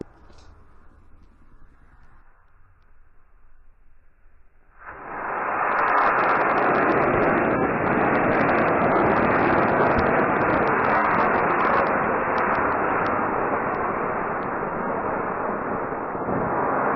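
Nothing stood out on listening to this clip.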